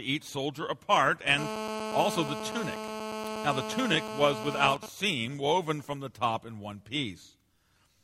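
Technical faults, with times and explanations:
1.38–4.75 s: GSM phone buzz, a steady raspy 217 Hz buzz with many harmonics, about 7 dB below the signal, as circuitry rectifies a nearby phone's call bursts.
4.76–5.97 s: GSM signalling bursts, a quieter pattern of even ticks with a longer 217 Hz buzz twice a second, as the phone sends only sparse bursts while its user stays silent.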